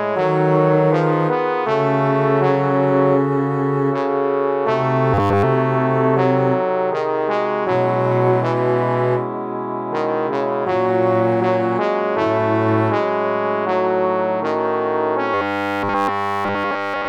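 Audio arriving too seldom likely caused robotic sound from repeated short buffers, with 10 ms chunks looped into a rigid 100 Hz buzz at 5.14–5.44 s (mostly repeats) and 15.34–17.08 s (entirely repeats).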